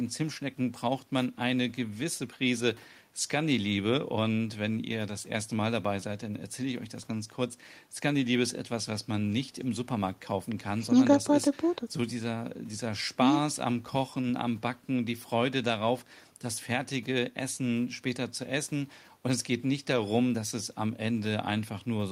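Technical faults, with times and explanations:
The speech signal holds steady with continuous level and intact bandwidth, and nothing in its technical state stands out as impaired.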